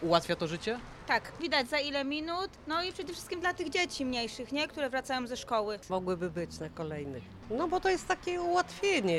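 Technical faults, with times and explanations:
3.03–4.83 s GSM phone buzz: a steady, raspy 217 Hz buzz about 25 dB down, radio bursts rectified by the audio circuit; harsher than 50/60 Hz mains hum.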